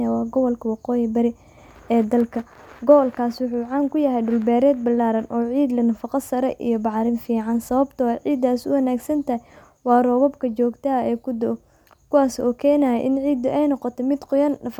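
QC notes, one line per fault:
No faults found in this recording.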